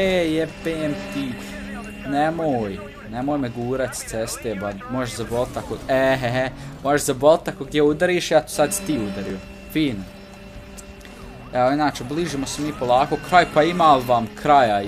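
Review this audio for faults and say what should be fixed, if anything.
Audio missing between chunks: the recorder likely drops a few milliseconds at each 6-second chunk boundary, so the sound skips abruptly at 3.31 s and 9.30 s. Double-buffer or overlap the chunks so capture continues through each handover and no samples are discarded.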